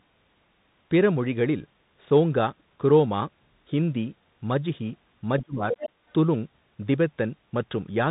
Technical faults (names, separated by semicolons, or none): Bluetooth CVSD headset codec; speech suppressed in double talk; other side's voice leaking through